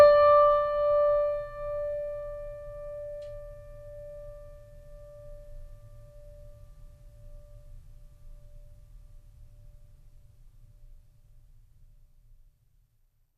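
No faults can be heard anywhere in this music clip.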